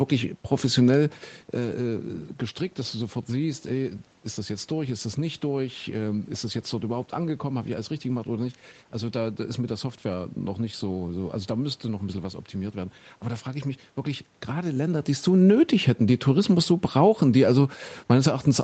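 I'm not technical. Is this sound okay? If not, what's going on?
Yes, nothing is technically wrong here: the recording went through an ordinary call connection that normally leaves out sounds above about 8 kHz, and the changes in loudness at about 1 second and about 14 and a half seconds are simply the talker shifting closer to or farther from the microphone.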